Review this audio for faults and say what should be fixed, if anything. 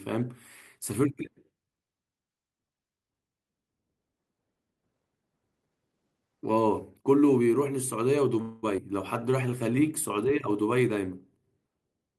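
A call audio freeze runs from 8.41 to 8.65 s. The last sound is carried on as a fading buzz or hiss for about 213 ms. Then the speech resumes where it left off, so nothing is lost; a gap has been inserted instead. The likely cause is packets held up in transit while the jitter buffer ran dry, leaving the receiver to extend what it had. A larger or better-adapting jitter buffer on a steadier network path would prevent this.

A skip ahead follows at 8.77 to 8.80 s. Playback jumps forward with only about 10 ms of filler at the join. Roughly a tenth of a second of speech is gone, and the two sides are butted together almost directly. The receiver dropped a stretch of audio while later packets were already queued, taking back about 100 ms of the delay the freeze had just added. Gentler buffer draining, using time compression rather than discarding audio, would prevent it.

A jitter buffer slow-down runs from 9.20 to 9.87 s. 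The speech plays at about 90% speed with the pitch unchanged. Sounds are drawn out, and a faint warble is possible. About 71 ms was added by repeating single pitch periods and bits of pauses many times over. The buffer was running low or had just raised its target delay, and the receiver was rebuilding its reserve. Keeping enough buffer headroom so that refilling stays rare and spread thinly would prevent this.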